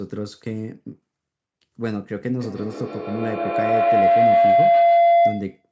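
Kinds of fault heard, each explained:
Feedback howl: from 2.41 s a room loop builds a tone around 700 Hz, pulsing about every 150 ms, peaking about 11 dB above speech; spectrogram shows one bright horizontal band.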